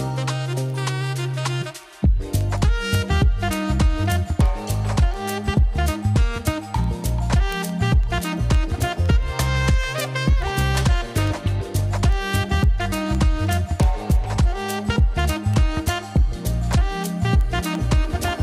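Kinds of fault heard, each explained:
Word clock ticks: unlocked digital clocks slip a single sample about every 0.15 s, giving thin, evenly spaced vertical lines on a spectrogram and waveform spikes.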